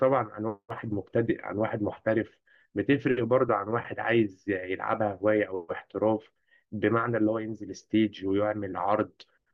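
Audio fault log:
Nothing in the speech stood out as a fault on listening.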